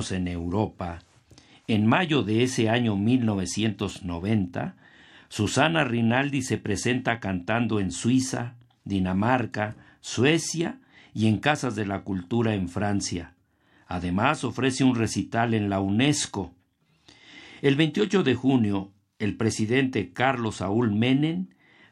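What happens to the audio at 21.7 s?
Nothing goes wrong at 21.7 s: the speech continues intact through that moment, with no dropout, click or distortion.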